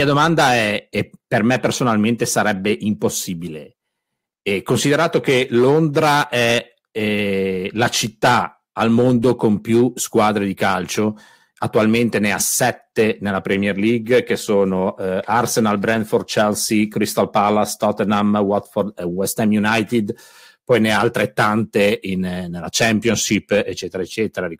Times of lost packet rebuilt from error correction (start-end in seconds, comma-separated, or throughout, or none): 15.93-15.99